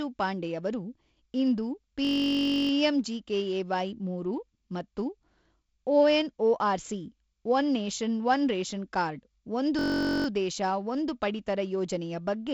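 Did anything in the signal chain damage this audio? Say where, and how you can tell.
Yes. A system hang loop at the driver/buffer stage leaves a 21.33 ms piece looping as a 46.9 Hz buzz from 2.05 to 2.71 s, after "ಪಾಂಡೆಯವರು ಇಂದು", and from 9.79 to 10.26 s, between "ಒನ್ ರೇಷನ್ ಕಾರ್ಡ್ ಒಂದು" and "ದೇಶ ಒಂದು ಪಡಿತರ ಯೋಜನೆಯ". The waveform shows identical repeating cycles, and the spectrogram shows flat harmonic stripes. The loop length fits a 1024-sample buffer, and the G.722 band limit near 7.7 kHz runs straight through.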